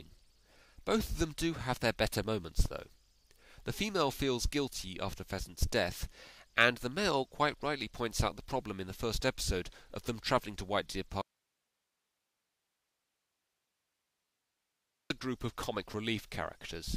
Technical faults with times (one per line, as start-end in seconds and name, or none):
11.22-15.10 audio dropout to a faint residue